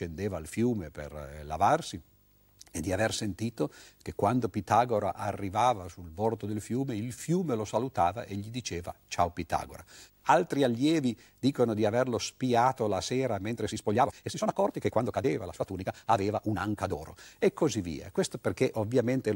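Right from the start there's video or display buzz under the speech: a steady 50 Hz buzz at the picture's field rate with hash on top, plus a faint whine at 15.6 kHz from the line scan, sitting around 35 dB down. A screen or video cable has coupled into the audio path.

After "averlo spiato la sera", from 13.47 to 17.05 s, the pace suddenly jumps to about 1.49 times normal while the pitch stays put, so it comes across rushed. That's a time-stretched section, likely squeezed in software to fit a length by dropping short slices.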